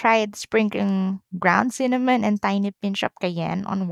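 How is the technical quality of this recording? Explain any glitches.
The speech recording has no technical glitches, with the signal staying continuous and undisturbed throughout.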